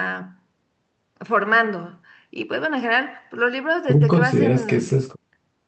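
No technical faults are audible anywhere in this recording.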